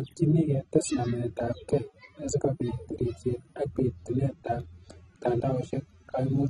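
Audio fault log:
Throughout: AAC compression, nothing above 12.7 kHz, with plainly audible dull, smeared, warbling sibilants, likely from AAC-LC coding at a low bitrate, consistent with 24 kbps.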